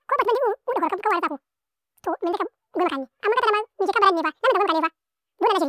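From the first moment to the last, the speech runs at double speed. Pitch rises by 12 semitones, a full octave. This is a wrong sample rate fault. The samples were played back faster than they were captured, with no conversion between the two rates. Speed and pitch therefore shift together by the same factor of two. The sound fits audio recorded at 16 kHz but played at 32 kHz. Voices come across thin, squeaky and hurried.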